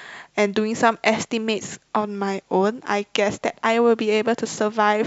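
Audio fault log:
Nothing stood out on listening to this speech recording.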